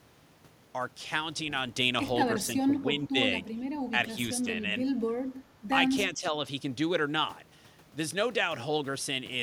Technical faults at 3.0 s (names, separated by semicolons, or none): speech suppressed in double talk